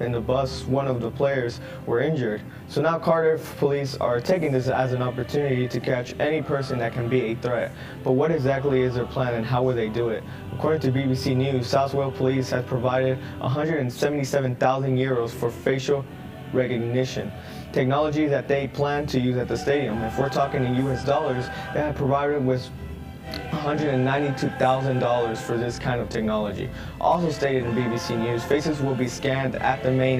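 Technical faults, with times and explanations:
Throughout, channel delay (comb filtering): one side trails the other by around 20 ms, and when they're folded to mono the shared content cancels at evenly spaced frequencies, starting down around 20 Hz. With a delay that long, everything sounds rough and slightly doubled.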